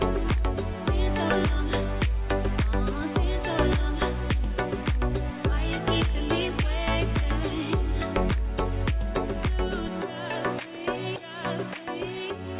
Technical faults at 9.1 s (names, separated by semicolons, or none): none